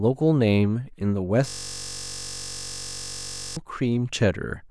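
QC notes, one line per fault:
1.48–3.57 s, system hang loop: the machine or audio driver stalled while the sound hardware kept replaying the same 21.33 ms stretch of its ring buffer, which fits a 512-sample buffer. That single slice of speech repeats exactly 98 times, so for about two seconds the speech is replaced by a steady buzz pitched at the 46.9 Hz loop rate. The buzz comes from the rapid identical repeats, not from the speech's own pitch.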